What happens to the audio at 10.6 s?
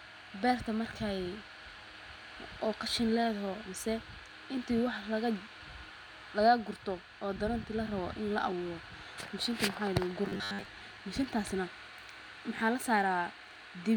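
At 10.6 s the speech is in robotic sound from repeated short buffers (10.26–10.66 s): a rigid 100 Hz metallic buzz, likely from a 10 ms chunk repeated over about 70% of that span. This shows as evenly spaced 100 Hz harmonic stripes and identical repeating waveform cycles.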